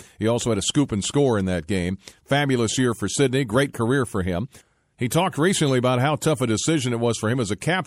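Throughout, likely MP3 compression short of bits, consistent with 64 kbps, flickers weak detail, so the speech sounds plainly watery, with chirpy s sounds.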